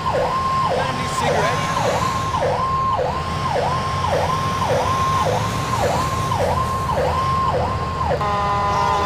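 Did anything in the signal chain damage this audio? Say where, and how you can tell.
Yes: crude rate conversion from 4.11 to 5.61 s, a sample-format conversion stage. A 48 kHz to 44.1 kHz change by picking nearest samples, unfiltered, adds an inharmonic gritty fizz roughly 25 dB below the signal.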